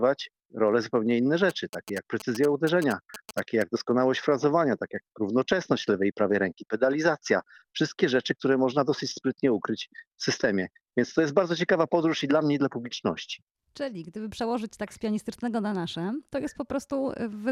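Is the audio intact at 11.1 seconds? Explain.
Yes, the audio is intact at 11.1 seconds, with no dropout, click, distortion or other fault audible at that moment.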